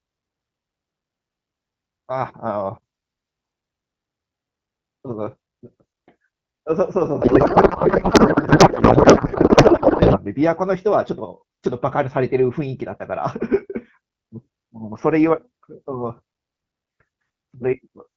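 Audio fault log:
7.21 to 10.20 s, codec payload misread: the speech gives way to garbled noise and warble that barely follows it. The AMR-WB decoder is unpacking frames with fields in the wrong positions, which fits octet-aligned payloads being read as bandwidth-efficient. Clear HD Voice resumes afterwards.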